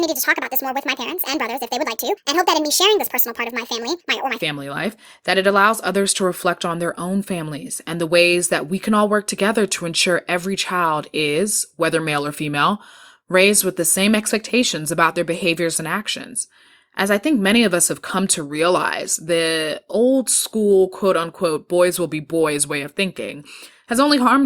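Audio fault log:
0.00–4.42 s, section at the wrong speed: the opening stretch of speech plays back 1.62 times faster than it was recorded, so the voice sounds rushed and chipmunk-like, sitting roughly seven semitones above its natural pitch. Because speed and pitch are tied together, both jump at once and settle back to normal when the section ends. The likely cause is that this portion was clocked out at the wrong rate during editing or playback.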